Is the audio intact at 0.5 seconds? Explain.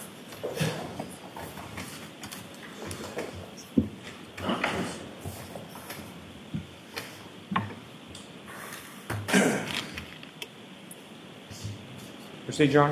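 Yes, at 0.5 seconds the audio is intact, with no dropout, click, distortion or other fault at that moment.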